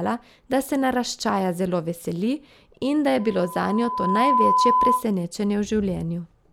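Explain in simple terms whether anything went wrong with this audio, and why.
From 3.19 s to 5.05 s, a steady 1 kHz whistle swells over about a second. This is loudspeaker feedback squeal: the microphone keeps re-amplifying its own loudspeaker.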